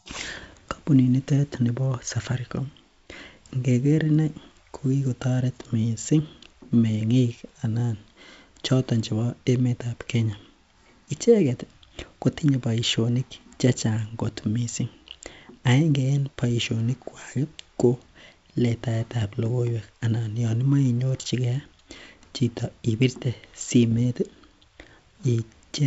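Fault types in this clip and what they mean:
Bit errors on an ADPCM link: flipped bits in the G.722 stream knock the decoder's step size and predictor off track, so each error rings on for a few milliseconds as pops and rough, gritty bursts with brief level jumps. They cluster from 0.32 to 0.60 s and again from 23.91 to 24.07 s, the first run denser. A waveform shows spiky outliers and short level steps; a spectrogram shows thin vertical broadband streaks cutting through the speech.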